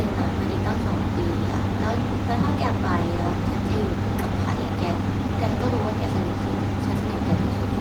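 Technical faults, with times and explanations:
No technical faults are audible in this speech recording; the Opus voice compression, running in hybrid mode at 20 kbps with fullband content reaching about 20.1 kHz, leaves only light coding traces.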